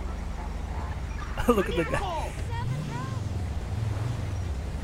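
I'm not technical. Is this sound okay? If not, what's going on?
No, not quite. From about 0.28 s to 4.53 s there's a tick roughly every quarter of a second, around twenty in all. That's a periodic USB or driver dropout: something on the computer keeps briefly interrupting the audio connection on a steady schedule, and each time a tiny sliver of sound, well under a millisecond, simply gets skipped. Because the gaps are so evenly spaced, they come across as a regular ticking over the sound.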